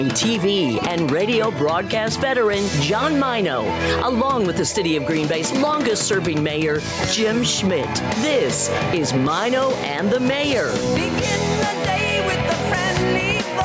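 Throughout the clip, gain pumping can be heard: the sound ducks by around 5 dB under each loud moment, which points to a likely cause of input gain set too high with a fast limiter or compressor pulling it down. The result is squashed, with loud and soft parts pressed close together, while the band-limited call processing, with nothing above 8 kHz, sits underneath.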